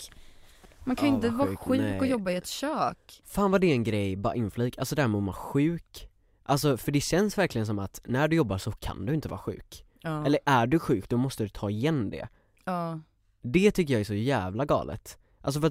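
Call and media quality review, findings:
Repeated buffer at 0.64 s: brief buzz-like click in the speech, the same slice of about 5.3 ms played three times with hard joins. Fits a 256-sample buffer replayed when the playback device ran dry. About 10 ms of audio lost.

Repeated buffer at 9.29 s: identical symptom, a short buzzy stutter from one 5.3 ms block repeated twice over. Same playback underrun mechanism, same loss of about 10 ms.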